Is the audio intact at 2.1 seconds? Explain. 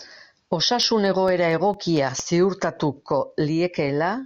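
No, 2.1 s falls within CD scratch ticks from 0.83 to 2.42 s: eight brief, few-millisecond ticks as damaged disc data is interpolated or muted, seen as thin vertical broadband lines.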